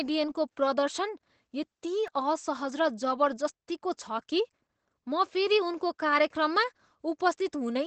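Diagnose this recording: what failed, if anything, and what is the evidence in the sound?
At the codec stage, Opus voice compression is audible across the whole speech clip. Nothing reaches above about 8.6 kHz, which matches SILK's wideband mode, and the coarse coding of the excitation at 12 kbps leaves the speech muffled, hoarse and slightly robotic. A simple low-pass filter would only dull the sound. This codec also roughens the texture of the voice.

At 2.07 s a repeated buffer comes from the driver or buffer stage. New audio arrived late, so the device played the same tiny piece four more times, with a hard join at each repeat. The piece lasts about 1.45 ms, which fits a 64-sample buffer. Because the repeats come so quickly, the stutter is heard as a brief buzz or click. A dropout would leave a silent gap, but here the stretch is filled with the same piece played again, and roughly 5 ms of new audio is lost.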